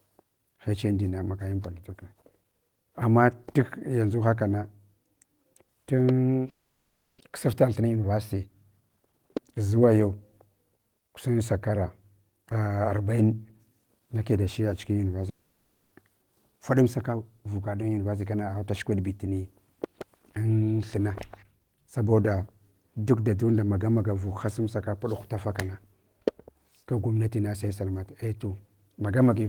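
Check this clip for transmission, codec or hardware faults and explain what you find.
There are two problems here, both from the network path: a pair of long gaps in the speech, and some hurried stretches right after them.

Long network dropout, 6.49 to 7.22 s and 15.29 to 16.03 s. The likely cause is that packets stopped arriving for a while. The receiver kept the last sound going as a fading buzz, then went quiet. The first gap has a long silent tail, and the second has only a brief one. Each time, about 400 ms of speech is simply missing when the audio resumes.

Jitter buffer speed-up, 7.30 to 9.13 s, 16.49 to 17.17 s, and 17.83 to 19.10 s. After each gap the receiver was holding too much buffered audio. It trimmed tiny pitch-period slices to catch up, roughly 300 ms, 70 ms and 150 ms' worth. The speech plays 15%, 8% and 12% fast with the pitch unchanged, so the talker sounds briefly rushed.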